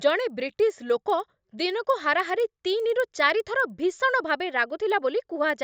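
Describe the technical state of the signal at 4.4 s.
At 4.4 s the speech carries a resampler restarted on every block, present across the whole clip. Each 100 ms block was converted from 16 kHz to 48 kHz separately, leaving a small error at every block edge, heard as ticks at 10 Hz. A spectrogram shows faint vertical broadband lines every 100 ms, and the waveform shows tiny discontinuities at each boundary.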